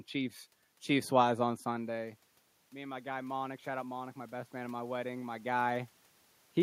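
Automatic gain rising runs from 1.43 to 5.97 s. When the talker moves away around 1.5 s, the input drops by about 12 dB, and the gain control slowly adds about 6 dB. Voice and room noise swell together, and the talker moves again near 5.5 s.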